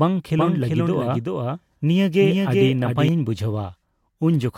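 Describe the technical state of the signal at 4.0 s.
At 4.0 s the speech signal is intact, with no fault present at that moment.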